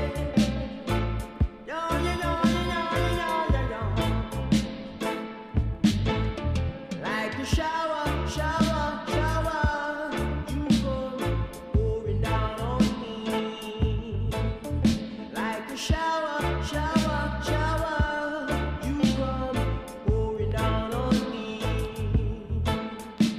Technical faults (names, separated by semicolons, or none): none